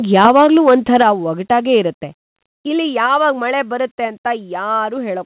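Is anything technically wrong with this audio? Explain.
Yes. From 0.14 to 1.02 s there is microphone overload: peaks exceed the converter's limit by about 5 dB, likely from excessive input gain. The waveform shows flattened tops and the speech crackles harshly.

Microphone volume stepped down abruptly at 1.02, 2.04, 3.06 and 4.08 s, by about 6, 3, 2 and 2 dB. This was likely software lowering the input gain after the overload. The waveform envelope descends in stairs, and the spectrogram darkens sharply at each step, below a band that ends at 4 kHz.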